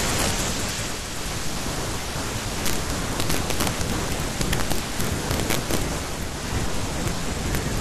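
Integer overflow runs throughout: peaks driven about 6 dB past full scale wrap to the opposite sign instead of limiting, producing sharp cracks on a small fraction of loud moments. From 0.86 s to 6.50 s the digital radio blends to the analogue FM broadcast, cross-fading over 455 ms at each end. Hiss sits roughly 25 dB below the speech, with no change in level.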